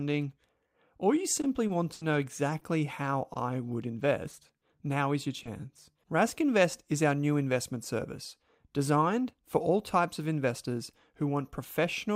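Packets were lost or arriving late between 1.41 and 5.67 s of this speech clip, starting just after "or you", and the receiver concealed each hole by extending the preceding sound. The result is scattered short gaps: around seven brief dropouts, none much over 70 ms, adding up to 240 ms of missing audio patched with 340 ms of rebuilt signal. They are heard as quick ticks, smears and hiccups across a small fraction of that stretch.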